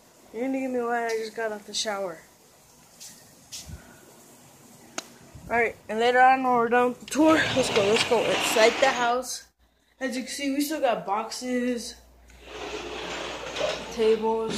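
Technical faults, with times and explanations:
No technical faults can be heard anywhere in the clip. Nothing in the sound calls for a time or an explanation.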